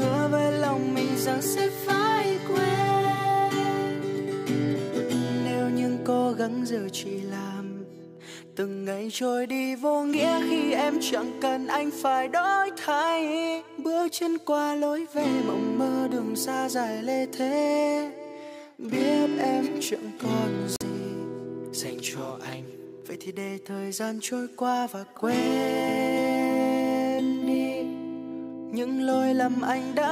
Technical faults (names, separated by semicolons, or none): Bluetooth dropout